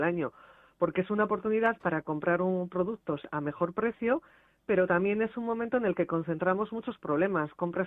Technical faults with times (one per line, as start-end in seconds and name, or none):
none